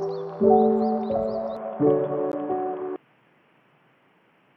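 At 1.57 s the sound abruptly turns dull and boxy and stays that way to the end, with nothing above 3.5 kHz. There is no gap at the change and the loudness holds steady, but a new background noise appears, roughly 35 dB below the signal. This is likely an input switched to a poorer device, such as a second microphone or a headset's call profile, whose narrower band and own noise floor replace the original pickup.

At 2.32 s a brief hole of 14.5 ms cuts into the sound, and the audio resumes further along, as though it had kept playing through the gap. The cause is likely a Bluetooth dropout: audio that missed its delivery window to the headphones was discarded, and the output stayed silent until the next good data arrived. The length of the gap fits a single lost packet.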